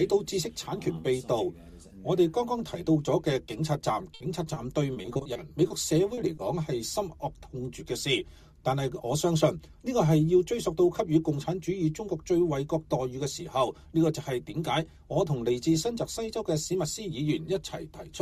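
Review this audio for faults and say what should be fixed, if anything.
From 4.14 to 6.39 s there's repeated packet loss (robotic sound): over a dozen short gaps, the longest 60 ms, each patched by stretching the previous sound, so it goes choppy with pieces missing. A bigger jitter buffer or forward error correction on a steadier connection would fix it.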